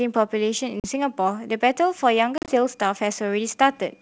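Packet loss on the ADPCM call silences about 40 ms at 0.80 to 0.86 s, then 80 ms in gaps over 100 ms at 2.38 to 2.52 s. Each hard-edged hole knocks the decoder's predictor and step size out of step, so the speech comes back with brief distortion before settling.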